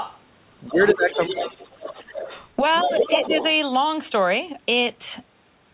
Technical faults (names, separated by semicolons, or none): other side's voice leaking through; speech suppressed in double talk